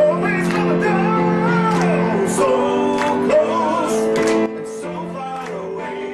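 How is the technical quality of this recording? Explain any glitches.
The recording has one clear glitch. At 4.46 s, a sudden gain jump drops the sound by about 11 dB, and it stays at that lower level until the end, with the background noise falling by the same amount at the same instant. The likely cause is a digital gain setting applied in a single step between two samples rather than ramped, so the level change is abrupt instead of smooth.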